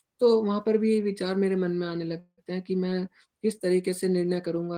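A call audio freeze interrupts this speech clip from 2.19 to 2.40 s, likely because packets stalled in transit and the jitter buffer emptied. The receiver stretches the last sound into a fading buzz or hiss, about 0.18 s of fill that ends in 40 ms of silence, before speech resumes where it stopped, nothing lost but everything after delayed.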